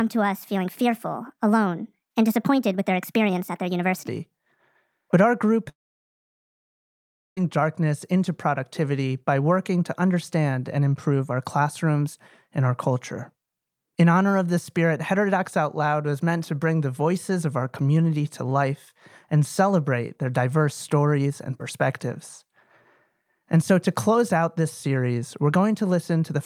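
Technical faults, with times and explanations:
0.00–4.08 s, section at the wrong speed: the opening runs 1.37 times too fast, raising pitch by about five semitones and hurrying the speech, likely from a clock mismatch during playback. On a spectrogram, harmonics and formants sit stretched upward and syllables look compressed in time.
5.69–7.38 s, long network dropout: after "our group", about 1.68 s of audio is lost. A brief fading buzz from concealment gives way to near silence until "darkness into productivity by" resumes, likely from interrupted packet delivery. The waveform shows a flat gap and the spectrogram a blank band.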